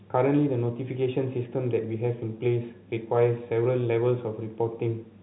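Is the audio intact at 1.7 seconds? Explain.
Yes, the speech at 1.7 seconds is intact, with no dropout, click or distortion, just the narrowband telephone sound of G.711 coding cutting everything above 4 kHz.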